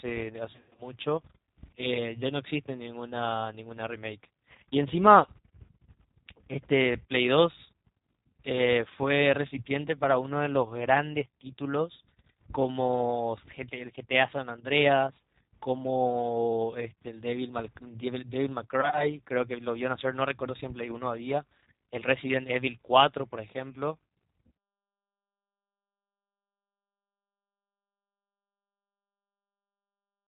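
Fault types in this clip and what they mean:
G.729 codec: The whole clip passes through a G.729 speech codec at 8 kbit/s, rebuilding the speech from a vocal tract filter, pitch prediction and sparse pulses. Nothing above 4 kHz survives, and the damage is plainly audible as a rough, synthetic quality.
VoIP packet loss concealed by the speech codec: Lost packets were filled in by the decoder, which extended the last pitch and filter while fading the gain. Around 0.54 to 0.82 s about 190 ms goes missing, runs up to 90 ms, stretched into a buzzy tone or coloured noise that fades. A shorter patch follows near 18.8 to 19.05 s.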